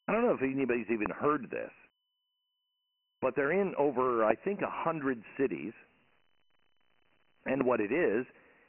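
Speech, heard through Dialogic VOX ADPCM, the 4-bit telephony format used for phone menus and voicemail. Nothing survives above 3 kHz. The rate of 24 kbps fits 6,000 samples a second at 4 bits each. Each sample is stored as a coarse step from a prediction, and the quantiser cannot keep pace. Heavy damage results: a gritty hiss clings to the speech and follows its level. The low end also thins out below about 200 Hz. Three loud pops cut through, each a single sharp crack roughly 20 dB above the speech. The first comes at 1.06 to 1.08 s, after "don't know if anybody's" and before "heard this". The second comes at 4.31 to 4.33 s, after "but they're in over". The third comes at 7.61 to 7.63 s. The speech carries on beneath each one. The likely cause is a voltage spike from a plug, a switch, static or a driver glitch.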